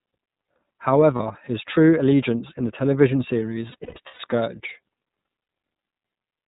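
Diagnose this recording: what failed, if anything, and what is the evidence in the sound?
The speech went through the iLBC codec, a narrowband VoIP coder, and the damage is plainly audible. Nothing above 4 kHz survives, and the voice sounds rough and synthetic throughout, which fits the 13.33 kbps mode with 30 ms frames.

Packets were dropped in the network, and the decoder concealed the lost iLBC frames by repeating the last pitch cycle mixed with noise. Held, buzzy fills sit at 1.16 to 1.21 s, before "his true allegiance in"; 3.72 to 4.21 s, after "allegiance in the television", scattered, longest about 100 ms; and 5.42 to 5.48 s.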